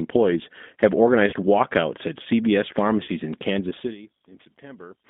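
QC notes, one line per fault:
Throughout, G.729 codec: the speech sounds slightly rough, buzzy and synthetic, with no air above about 3.6 kHz or below 200 Hz. Each 10 ms frame is rebuilt from a vocal tract filter, a pitch predictor and a few pulses at 8 kbit/s, which plainly flattens the detail.
1.30–1.34 s, 3.04–3.09 s and 4.54–4.56 s, VoIP packet loss concealed by the speech codec: brief smeared, buzzy stretches, the first just before "walkouts at". The gaps fit one, two and one lost 20 ms packets. The decoder fills them by extending its last pitch and filter at falling gain, and the sound stays weak briefly afterwards.
2.88–5.09 s, loudspeaker feedback squeal: a steady 4.4 kHz whistle swells over about a second and then holds a few dB above the speech until the end. A microphone is hearing its own loudspeaker, and at that frequency the loop gain exceeds one, so the tone keeps feeding itself.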